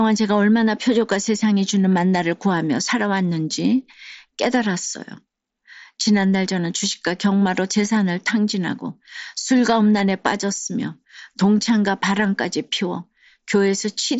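No technical faults can be heard in this speech recording.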